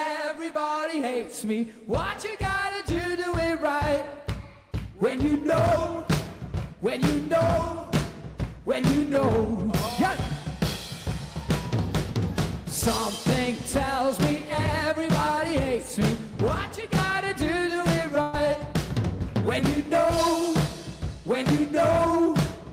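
At 18.21 s, running to 18.35 s, there is a burst of packet loss. About 120 ms of audio never arrived in time. The receiver stretched the last sound to fill the gap, fading it down. It is heard as a brief held tone or hiss. Then the audio jumps ahead.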